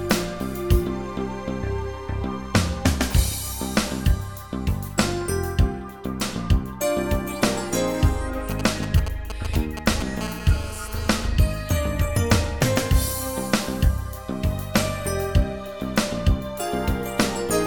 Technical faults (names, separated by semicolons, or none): GSM signalling bursts; GSM phone buzz